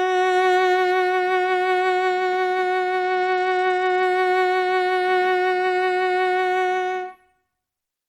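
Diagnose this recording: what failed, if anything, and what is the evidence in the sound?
Bluetooth SBC bit pool drop, at the codec stage. From 3.03 to 4.03 s the music loses its treble and takes on a gritty noise, then recovers. The phone starved the encoder on a busy link. The dullness fits a bit pool cut to about 12, near 88 kbps.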